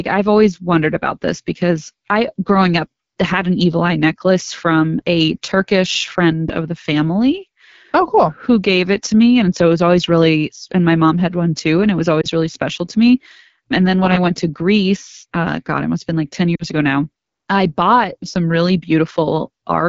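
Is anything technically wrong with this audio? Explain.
Yes. Throughout, the speech sounds rough and raspy, with a grainy, buzzy edge. This is the AMR wideband (HD Voice) codec at 8.85 kbit/s, one of its lowest rates. There the pulse-driven vocal tract model can't capture the voice finely, and the top band is only synthetic noise.

At 12.21 to 12.27 s the sound briefly dips or warbles, and at 16.55 to 16.63 s it drops to near silence; each time it then returns weak or rough for a moment. These are lost AMR speech frames. The decoder repeated the previous pitch and vocal tract settings with falling gain. The first gap fits one lost 20 ms frame, and the second fits two in a row.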